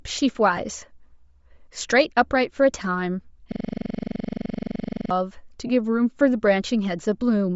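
Throughout the speech, a grainy, breathy upper band and plainly audible codec damage point to Bluetooth LC3 compression, likely at a low bitrate around 32 kbps with 10 ms frames. At 0.57 s, a lost LE Audio frame leaves a brief noisy smear where the decoder repeats the previous spectrum with randomised signs for about 10 ms. From 3.52 to 5.11 s, a system hang loop repeats one 42.7 ms piece of audio 37 times at about 23 Hz, a machine-gun stutter that fits a 1024-sample buffer. From 5.67 to 5.70 s, lost LE Audio frames again replace about 20 ms with a concealed, noisy smear.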